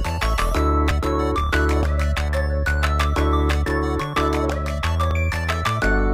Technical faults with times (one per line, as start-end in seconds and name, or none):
1.83 dropped buffer (overrun)
5.11 dropped buffer (overrun)